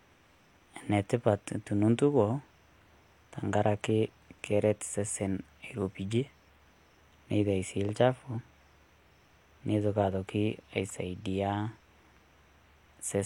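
No technical faults can be heard anywhere in the recording; the signal stays intact and continuous throughout.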